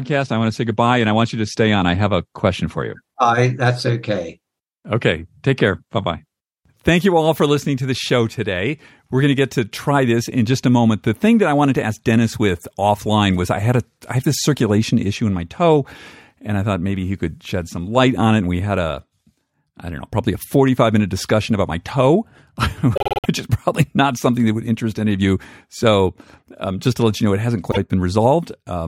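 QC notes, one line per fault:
22.95–23.26 s, repeated frames: a 52 ms block, which fits two compressed frames, plays five extra times right before "which is probably not", adding 0.26 s. It is heard as a machine-gun stutter. Unlike a dropout or packet-loss concealment, nothing goes missing or smears; the identical fragment simply recurs.
27.70–27.77 s, repeated frames: after "you know it hasn't", a 52 ms block plays once more, adding 52 ms. It is a single hiccup, an exact copy rather than a glitch of noise.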